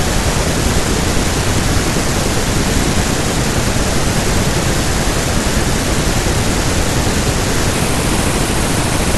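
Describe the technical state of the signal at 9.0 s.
At 9.0 s the speech sounds hurried and pitched up by roughly five semitones. It falls within a section at the wrong speed, running from 7.72 s to the end of the clip at 9.18 s, played 1.37 times too fast, likely because that stretch was fitted to the wrong clock.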